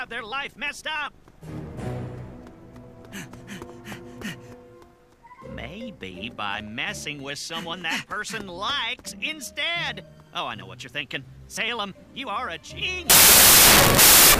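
From 13.10 s to the end at 14.39 s, the audio turns to harsh, loud noise: a wrong sample width fault, where 16-bit samples are read as packed 24-bit ones. Each read value straddles mismatched bytes, so only fragments carry the true top bits, and the faint remnant of the sound runs fast and high, at 1.5 times speed. The waveform jumps sharply in level, and the spectrogram fills with broadband energy over a weak, upward-shifted trace.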